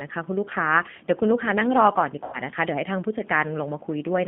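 Throughout the speech, the G.729 codec is plainly audible. The line is confined to roughly 150 Hz to 3.5 kHz, but what separates this from simple telephone band-limiting is the texture. Each short frame is rebuilt from a vocal tract filter, a pitch predictor and a few pulses, which fits an 8 kbit/s G.729A stream. Voiced sounds come out slightly rough and synthetic.

From 2.24 to 2.40 s, VoIP packet loss concealed by the speech codec stretches the sound. About 90 ms of audio went missing, consistent with a few lost packets. The decoder kept repeating its last pitch and filter at falling gain, so the gap is a buzzy tone or coloured noise that fades rather than silence or a click. Unlike a plain dropout, the damage lingers: frames after the loss stay weak or distorted until the decoder's memory recovers.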